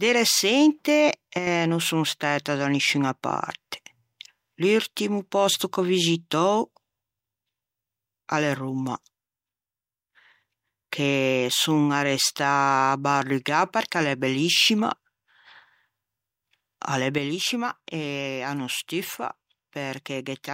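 At 1.38 s the level sags by about 6 dB for a brief stretch, recovering at 1.47 s. Then, right after "a l'é" at 17.18 s, the same sudden drop returns and holds through to the end at 20.54 s. Both sound like one channel drops out, likely with one side of the stereo pair going silent, so the mono sum loses half of the shared signal.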